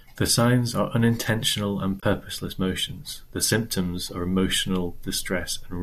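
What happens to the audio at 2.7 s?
At 2.7 s the speech plays through intact, with no dropout, click or distortion at that point.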